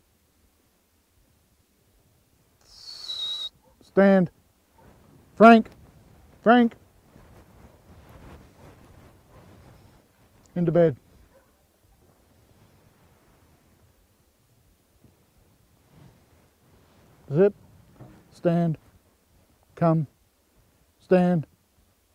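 A call bitrate drop runs from 8.64 s to 14.85 s. The audio turns coarse and muffled as the high frequencies fall away, and it stays at its roughest for about 4.6 s before clarity returns. That points to the encoder being pushed from roughly 96 kbps down to about 23 kbps after the bandwidth estimate fell. Packet loss would leave gaps and clicks, and a fixed filter would never recover. Here the sound stays continuous and the degradation lifts once the bitrate comes back.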